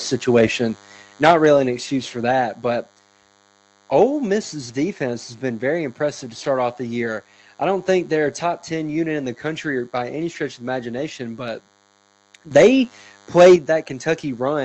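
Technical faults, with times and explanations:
Throughout, DECT cordless phone buzz: a thin, steady buzz sits under the speech, roughly 35 dB below it. It repeats at 100 Hz and is rich in harmonics. A nearby DECT handset or base sends a radio burst every 10 ms, and the audio circuitry rectifies those bursts into sound. Mains hum is a smoother, rounder tone at 50 or 60 Hz with few upper harmonics. This is a rasping, buzzy edge that stays steady through speech and pauses, and it reaches up into the 8 kHz band the call path passes.
0.36 to 0.44 s, 1.23 to 1.47 s, 4.01 to 4.03 s, 12.55 to 12.67 s and 13.37 to 13.55 s, microphone overload: the loudest syllables turn harsh and crackly. They peak at about 2, 10, 2, 5 and 7 dB over the limit. The worst is the 1.23 s burst just before "an excuse for" and the flattened 13.37 s stretch. The likely cause is input gain set so high that the peaks hit the converter ceiling and their tops are cut off. 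This is a gritty distortion bound to the loud moments. Codec coding noise would spread evenly over quiet and loud sound alike.
1.31 s, 2.31 s, 8.43 s, 12.57 s and 13.56 s, microphone volume stepped down: speech and background fall together in a single abrupt step of about 4, 3, 2, 4 and 7 dB. The 2.31 s drop comes right after "an excuse for" and the 8.43 s drop after "don't think they're a". Most of these follow a distorted peak, which points to the call software likely cutting the device's input gain in one step when it sensed overload. The drop is instant, not a gradual fade, and the buzz drops with the speech. That tells it apart from the talker simply speaking more quietly.
12.51 s, microphone volume stepped up: the level jumps sharply by about 12 dB, speech and background together. The call software has judged the input too quiet and raised the device gain in one step. The buzz rises with the speech, and overload follows almost at once at 12.55 s. 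That shows a sudden gain change in the chain rather than louder speech. Within about 60 ms a corrective 4 dB step down follows at 12.57 s.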